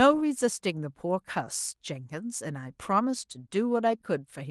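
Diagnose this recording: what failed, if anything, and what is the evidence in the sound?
Nothing failed in this recording.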